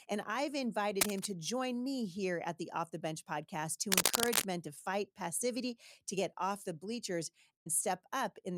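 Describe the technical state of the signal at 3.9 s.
A dense, uneven scratching and rustling sits on top of the speech from 3.87 to 4.50 s, a few decibels louder than the speech itself. This cable scratch noise is likely from a worn cable or connector being moved, its contact resistance fluctuating rapidly.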